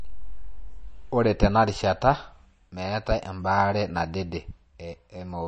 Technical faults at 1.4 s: MP3 compression

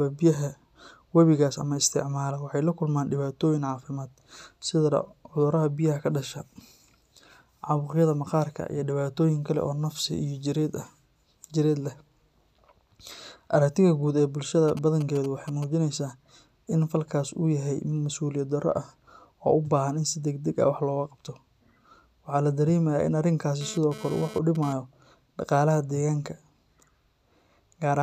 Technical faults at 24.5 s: GSM phone buzz

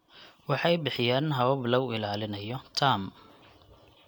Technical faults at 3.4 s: none

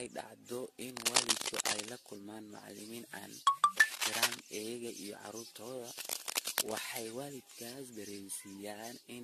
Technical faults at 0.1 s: generation loss

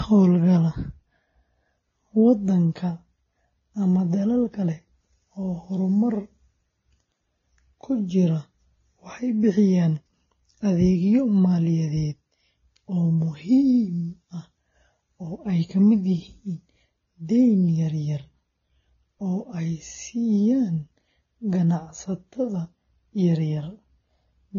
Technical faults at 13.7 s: transcoding between lossy codecs

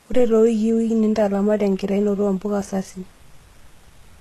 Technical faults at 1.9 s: HE-AAC compression

